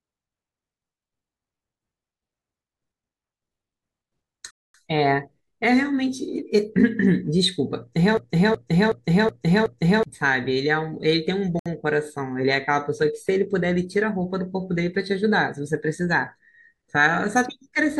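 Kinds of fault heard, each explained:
Bluetooth stall: the speech drops to silence for 236 ms at 4.51 s and 65 ms at 11.59 s, then resumes, likely from wireless packets arriving late.
System hang loop: from 8.17 to 10.03 s a 372 ms slice repeats five times at 2.7 Hz, replacing about two seconds of audio.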